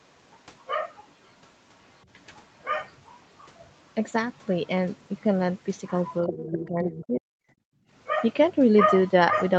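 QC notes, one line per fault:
6.27–6.68 s and 6.86–7.05 s, other side's voice leaking through: a second voice sits faintly behind the talker in two short scraps, roughly 10 dB under the main speech. The likely cause is a far-end signal playing from the talker's loudspeaker and reaching the microphone, with the echo canceller failing to strip all of it before the signal was sent.
6.27–6.91 s and 7.07–7.35 s, speech suppressed in double talk: the talker's level sags while the far side plays on the loudspeaker, by around 15 dB in the first stretch and about 40 dB in the second, where the speech nearly vanishes for a moment. About 0.4 s and 0.3 s are affected. This likely comes from the canceller hearing both sides at once, failing to tell the talker from the loudspeaker echo, and turning everything down to be safe.
7.63–7.9 s, background gated by the echo canceller: the room tone drops out abruptly, falling about 39 dB for roughly 0.3 s, then snaps back. 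The canceller clamped the microphone hard while it judged the loudspeaker to be active and released it once that judgement cleared, which leaves a brief hole of near-silence in the ambience.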